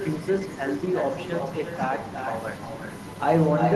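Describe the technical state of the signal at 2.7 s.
At 2.7 s the speech is shadowed by a quieter, thinner copy of itself arriving roughly 0.4 s behind, sitting about 9 dB below the direct voice. That is echo with no canceller, present for the whole clip. The far end is playing the call through a loudspeaker, its microphone captures that playback, and nothing subtracts it, so the voice returns after the network round trip, carried over the Opus-coded call path.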